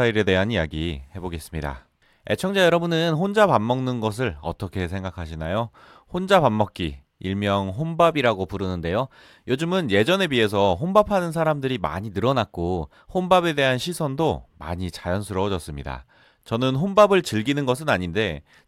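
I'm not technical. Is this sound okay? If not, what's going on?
No. Three times the speech suddenly runs faster and higher, then drops back: from 2.49 to 3.15 s, 8.11 to 9.62 s, and 11.96 to 13.17 s. Each time it speeds up by 6 percent and rises about a semitone. This is a drift correction step. The likely cause is software keeping two clocks in sync, which briefly changed the playback rate in one jump to fix its timing.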